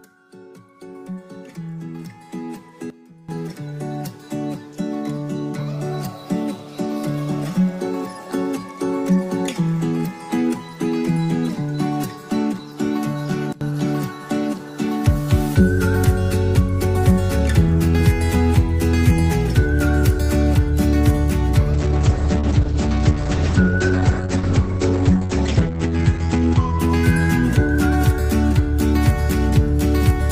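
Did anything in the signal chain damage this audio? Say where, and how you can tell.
Yes. Sudden gain jumps appear at 2.90 to 3.29 s and at 13.53 to 13.61 s. The level drops by about 18 dB in the first and by about 21 dB in the second, then snaps back. The sound and the background noise fall together, from one sample to the next, with no fade. That points to a digital gain stage rather than the source. The likely cause is a gain setting or bit shift in the driver or format-conversion path, applied without a ramp.

A call bitrate drop runs from 21.75 to 28.09 s. The network's bandwidth estimate fell, and the Opus encoder went from 40 kbps to 9 kbps, staying at the bottom for about 4.5 s. At that rate the codec quantises coarsely and narrows the coded band from 20 kHz to 8 kHz. The sound turns rough and muffled, losing its top end, until the bitrate climbs back near the end of the clip.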